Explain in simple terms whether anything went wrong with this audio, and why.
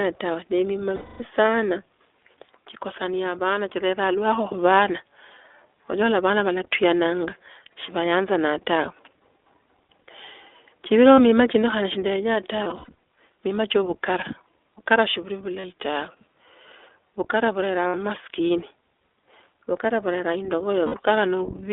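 The whole clip of speech has gone through the iLBC codec, a low-bandwidth internet-phone codec. It keeps only roughly 300 Hz to 3.6 kHz, so the voice sounds thin and phone-like, and the way it rebuilds speech in short, self-contained chunks leaves it noticeably rough and a bit synthetic. That damage is plainly audible from start to finish, not just in spots.

On top of that there are lost iLBC frames: bits of the stream went missing, and the decoder papered over each gap by repeating the last bit of voice with some noise mixed in. You hear a short held, slightly buzzy vowel at 0.96 s (about a quarter second), 11.14 s, 15.60 s, 17.88 s and 20.86 s (each under a tenth of a second). At 12.64 to 12.94 s the losses come in several brief stutters rather than one. The voice recovers almost immediately after each gap.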